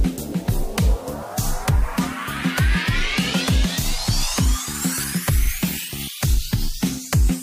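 From start to finish, the sound is coarse and grainy. Quiet passages turn gritty, and the softest moments sputter or drop out. This is low bit depth without dither. The grain likely comes from rounding the audio to about 6 bits with no dither. Each sample snaps to one of very few levels. The error tracks the signal, so the distortion changes with the sound. It sits only about 25 dB below the signal.

At 3.81 s there is a brief garbled moment. This is chunks out of order. A tiny slice of audio, about 5.3 ms long, arrives one chunk late. It plays after the slice that should follow it. Nothing goes missing, but the order is wrong. That creates three hard joins within about 11 ms. The joins are heard as a quick jumbled moment rather than a clean passage.

From 5.44 to 5.49 s the audio stutters. This is repeated frames. A 48 ms block, which fits two compressed frames, plays one extra time. The listener hears the same fraction of a second twice in a row. 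The clip runs 48 ms longer than it should.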